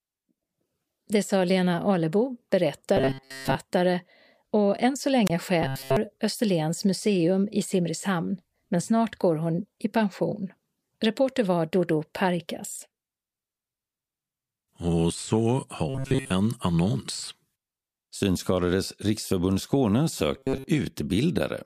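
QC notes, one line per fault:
2.97–3.56 s, 5.62–5.97 s, 15.89–16.31 s, 20.36–20.68 s: robotic sound from repeated short buffers. The speech turns into a rigid metallic buzz at 134 Hz, with most of the sound looped. This is likely a 7.5 ms chunk being replayed while new audio arrives late.
5.26–5.30 s, just after "och än så": wireless microphone squelch dropout. A brief hiss is followed by a 24 ms hole of near silence as the receiver's squelch mutes the fading radio signal.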